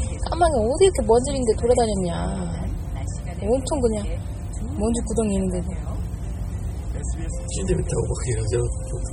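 Sounds, heavily damaged by what is likely MP3 compression throughout, pointing to about 32 kbps: weak components swirl watery, attacks smear, nothing above 17.4 kHz.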